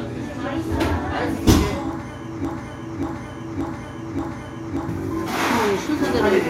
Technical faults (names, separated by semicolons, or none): broken-record loop